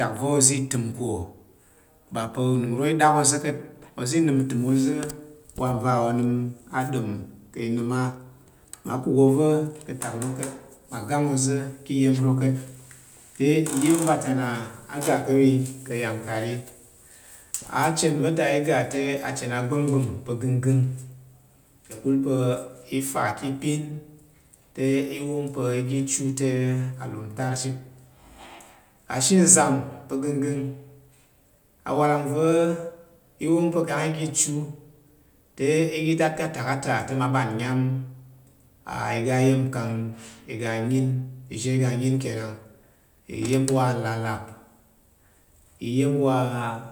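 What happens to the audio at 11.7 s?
Nothing goes wrong at 11.7 s; the speech carries on intact through that moment with no dropout, click or other fault.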